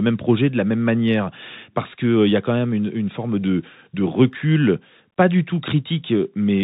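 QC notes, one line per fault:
Throughout: Bluetooth CVSD headset codec. Nothing above 4 kHz survives, so the speech sounds narrow and boxy. Each sample is one up-or-down bit, and loud high sounds outrun the adapting step. S sounds turn scratchy over a granular hiss.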